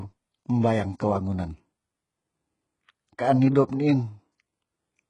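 Throughout the speech, the treble sounds bright but synthetic, with sibilants gritty and lispy and a hard ceiling at 10.5 kHz, likely HE-AAC compression at a very low bitrate around 12 kbps. Unlike a plain low-pass, the upper band is rebuilt from copied lower harmonics that don't line up.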